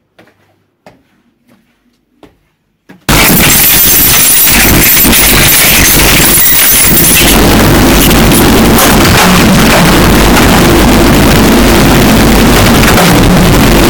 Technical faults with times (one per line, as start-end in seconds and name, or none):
3.09-13.90 float read as integer